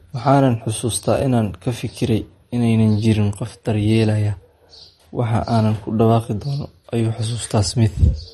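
From start to finish the speech carries plainly audible MP3 compression damage, likely from a low-bitrate encode around 40 kbps. Nothing gets through above 12 kHz. With bits that scarce, weak frequency lines flicker in and out between frames, which gives the sound a watery, swirly edge and smears the attacks.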